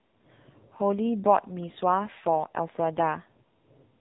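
From start to end the speech carries heavy AMR narrowband mobile codec damage. Nothing above about 3.8 kHz survives, and the voice comes out buzzy and synthetic, as a sparse pulse-driven vocal-tract model would produce at a low mode, which fits roughly 6.7 kbps.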